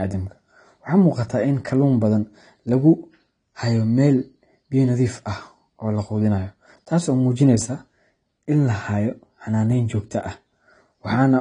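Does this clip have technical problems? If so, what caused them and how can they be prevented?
Yes. Throughout, likely AAC compression at a bitrate near 32 kbps discards detail, leaving nothing above 10 kHz and a dull, smeared, warbling speech sound. Encoding at a higher bitrate or keeping an uncompressed master prevents this.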